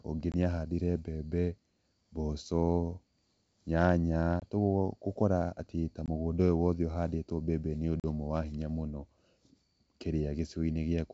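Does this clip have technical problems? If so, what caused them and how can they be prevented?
Yes. Packet loss on an ADPCM call: silent gaps at 0.32, 4.40 and 6.06 s (about one packet, 20 ms each) and at 8.00 s (about two packets, 40 ms). Each gap leaves the decoder's predictor and step size out of step, so the sound returns slightly distorted before settling. To prevent it, use packet-loss concealment that also resets the ADPCM decoder state, backed by a jitter buffer and redundancy or FEC on the network path.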